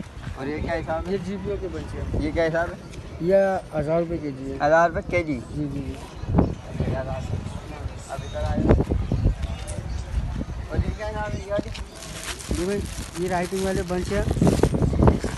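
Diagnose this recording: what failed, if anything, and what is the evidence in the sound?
Mains hum in the analogue wiring: from 10.11 s to 13.67 s a steady 60 Hz tone sits roughly 25 dB below the signal. A ground loop or nearby transformer is coupling the power line into the signal path during that stretch, adding this constant low drone.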